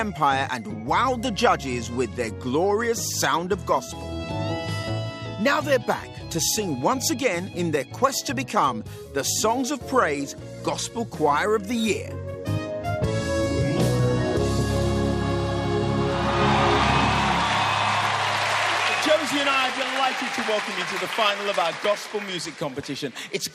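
No technical faults can be heard anywhere in this recording.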